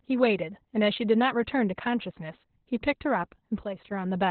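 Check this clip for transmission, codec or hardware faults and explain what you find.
One codec fault runs through the whole clip. Opus voice compression is present from start to finish: the coder is working in its SILK linear-prediction mode at narrowband, with nothing above about 4.3 kHz, and the damage fits a bitrate around 8 kbps. At that rate the excitation signal is quantised very coarsely, and the band is cut to the telephone range. The speech sounds muffled and dull, with a hoarse, buzzy edge and a faintly robotic, synthetic quality.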